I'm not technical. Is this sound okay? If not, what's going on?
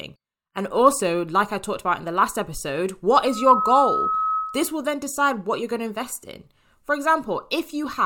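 No. Right after "in the last episode", at 3.2 s, a loudspeaker feedback squeal kicks in: the mic catches its own speaker, and a 1.3 kHz tone swells within about a third of a second and howls until 4.83 s, just before "then decide what you're".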